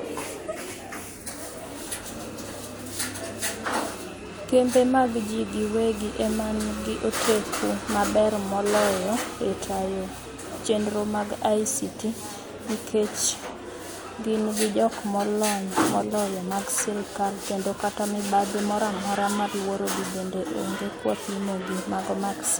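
Nothing in the recording stands out as a technical fault; the speech runs along without any glitch, dropout or interruption worth flagging.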